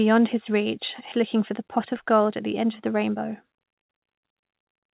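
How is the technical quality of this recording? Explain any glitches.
The speech is narrowband, with nothing above 4 kHz, and the coding grain fits a G.711 mu-law call path. Two timing faults stand out.

At about 1.12 s, just after "his reach", there is a skip ahead. Roughly a second of speech was discarded, either lost in transit or dropped by an overflowing jitter buffer while later audio was already queued. The two sides are spliced almost directly, with no silence filling the gap. That absence of a gap is what separates it from a dropout or a concealment gap: you hear an abrupt jump in content rather than a hole.

From 1.22 s to about 4.93 s there is a jitter buffer speed-up. The buffer was holding more audio than its target, most likely after delayed packets arrived together. To reduce the excess, the receiver repeatedly removed tiny slices of one or a few pitch periods, about a third of a second in total. 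The speech runs at 108% speed and sounds hurried, but the pitch stays the same. That separates it from a resampling or clock error, which would raise the pitch along with the tempo.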